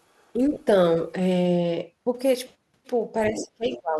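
Other side's voice leaking through at 0.16 to 0.32 s: a very faint second voice, about 40 dB below the speech, likely left behind when the echo canceller failed to fully remove the far end's loudspeaker sound from the microphone. Speech suppressed in double talk follows at 0.35 to 0.41 s, a shallow dip of about 5 dB lasting roughly 70 ms. The canceller, likely unable to separate the talker from the echo, turned both down.

Lost LE Audio frames at 0.54 to 0.60 s total 37.5 ms, consistent with five frames of 7.5 ms spread over 60 ms, the longest gap around 20 ms. The LC3 decoder reused the previous spectrum with random signs, so the speech briefly smears into noise.

From 3.3 s to the end, speech suppressed in double talk returns more severely, ducking the talker by up to about 25 dB across roughly half a second. Within it, the other side's voice leaking through comes in at 3.37 to 3.45 s, about 10 dB below the speech, and at 3.70 to 3.77 s, about 15 dB below.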